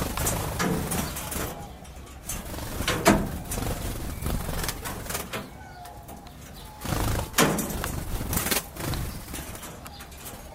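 Everyday sounds, with no audible technical faults.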